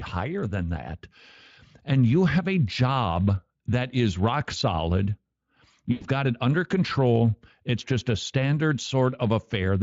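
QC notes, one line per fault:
5.91–6.06 s, VoIP packet loss concealed by the speech codec: just before "got it under control" the speech stretches and fades as the decoder extends its last pitch and filter at falling gain, which fits about five lost 20 ms frames.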